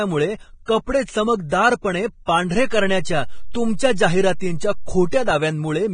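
The speech is dulled and grainy from start to finish. Nothing is heard above 9.7 kHz. The treble that remains sounds like hiss, not detail. Tones are roughened and attacks are blurred. This is heavy damage, likely from Vorbis compression. The codec cuts the top band at low quality. It then quantises the upper residue so coarsely that fine detail turns into noise of similar energy. The sound fits a low bitrate of around 22 kbps.

At 2.56 s a DC step occurs. The zero line of the waveform jumps to a new offset. This happens when a converter recalibrates or an offset input is switched in. It is heard as a low thump. The speech itself carries on unchanged. The offset lasts until 5.31 s and is gone after that.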